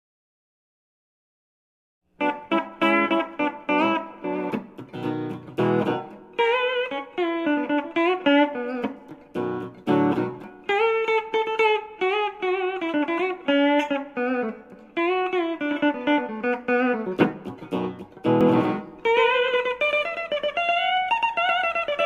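A doubled audio track starts abruptly at 18.41 s and runs to the end: a second, full-band copy of the sound, about as loud as the original, trails it by roughly a tenth of a second with no decay or room colour, likely from a slower second capture path or misaligned edit.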